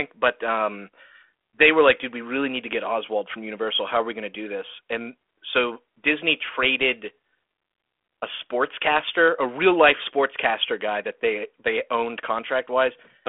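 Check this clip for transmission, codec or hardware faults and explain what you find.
No transmission, codec or hardware faults turn up in this clip.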